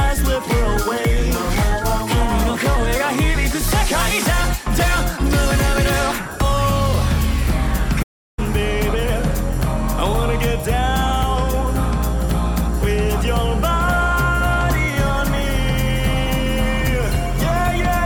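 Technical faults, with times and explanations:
8.02–8.39 s, playback stall: the sound stops mid-flow and the output falls silent for 0.35 s, then resumes. The likely cause is the player running out of buffered data, or its thread being blocked, so nothing reached the output until it recovered.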